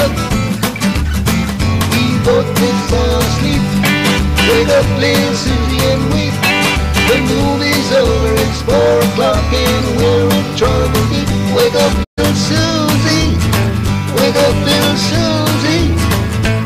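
At 12.03 s a digital broadcast dropout mutes the audio for 128 ms, fading out over about 20 ms and returning at 12.20 s further along. That fits roughly four failed frames. A clean fade to silence, rather than a click or glitchy concealment, marks it.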